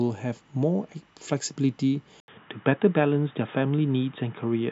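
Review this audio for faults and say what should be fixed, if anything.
At 2.20 s the speech drops out for about 80 ms and then continues to the end at 4.71 s sounding dull and boxy, with nothing above 3.8 kHz and a faint new background noise well below the voice, while loudness stays about the same. That points to an input switched to a poorer device, likely another microphone or a headset's call profile taking over. A plain low-pass filter or codec bandwidth drop would not bring the gap or the fresh noise. To prevent this, lock the recording input to one device and disable automatic switching.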